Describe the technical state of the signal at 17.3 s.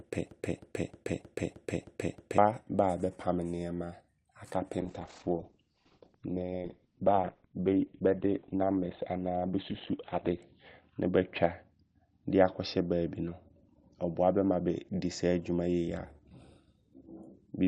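At 17.3 s the speech signal is intact, with no dropout, distortion, glitch or other fault at that moment.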